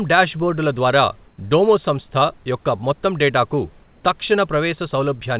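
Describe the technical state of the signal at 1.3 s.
From 1.28 to 1.38 s the background becomes synthetic, featureless hiss about 3 dB quieter, likely comfort noise in place of the background. A spectrogram shows a smooth, detail-free band with a slight level dip.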